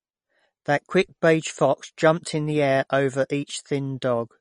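A speech recording with MP3 compression damage that is plainly audible from start to finish. Nothing is present above about 10.5 kHz, and the upper bands have a watery, swirling quality with metallic chirps on the s sounds, likely from an encoder starved of bits, which fits a bitrate near 38 kbps. A simple low-pass filter would dull the treble just as cleanly, but it would not make weak detail flicker in and out or smear consonant attacks this way.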